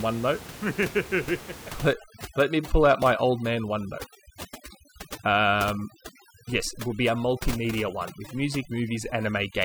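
A speech recording whose noise reduction was set too strong from 1.93 s to the end shows overdone noise removal: frequency bands near the noise estimate are pulled down or off, so the room noise, about 15 dB below the speech, breaks into twinkling, warbling specks and quiet parts of the voice go with it.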